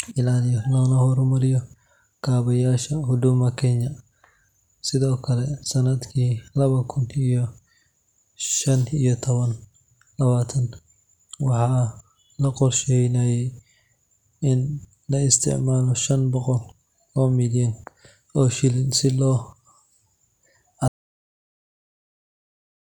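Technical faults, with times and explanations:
20.88 s to the end: audio dropout to silence. The speech cuts off mid-flow at 20.88 s and never comes back, so the last 2.1 s or so are pure silence, with no room tone or hiss underneath. That dead-flat gap is what gives it away. A natural pause would still carry some background. This is likely the input dropping out, maybe a loose connection or a mute getting hit, while the recorder kept writing silence.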